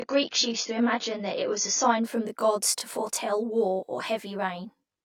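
From the first moment to the end of the speech, a channel delay causes comb filtering. One channel trails the other by roughly 20 ms, and when the two are folded to mono, the shared sound cancels at evenly spaced frequencies beginning somewhere around 20 Hz. The result is rough and slightly doubled throughout. On a spectrogram this shows as fixed horizontal dark stripes, regularly spaced notches that stay put whatever the speech does.

From 0.0 to 2.0 s, the adaptive stream is starting at a low bitrate. The player began on a cheap version of the stream and then switched up once it had gauged the connection. The opening sounds dull and more smeared by the codec, with nothing above 6.9 kHz, which fits a low-rate AAC tier near 24 kbit/s. At 2.0 s the treble returns abruptly with no gap, consistent with a step to around 96 kbit/s. A spectrogram shows a flat ceiling at 6.9 kHz that lifts suddenly there.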